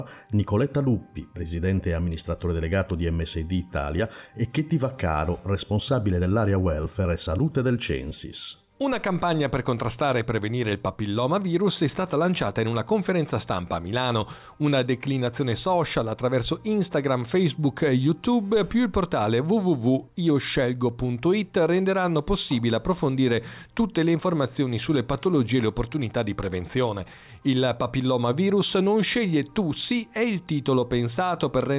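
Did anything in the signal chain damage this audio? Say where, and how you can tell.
No, nothing in the signal chain audibly damaged this audio. None of the stages from capture through to playback leaves any mark on the sound.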